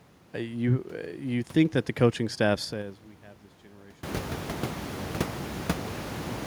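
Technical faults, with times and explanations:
2.56–3.16 s, zipper noise: a ticking zip after "that the coaching staff", the level falling about 25 dB in unsmoothed 4 dB steps, some ten a second.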